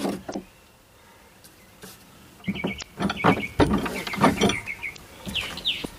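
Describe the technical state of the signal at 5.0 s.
Around 5.0 s the signal carries damaged data in a compressed stream, from 4.93 to 4.98 s. Corrupted frames there are misread by the decoder, which loses sync and hunts for the next valid frame header, producing a short chirp, squawk, click or hole lasting about 55 ms.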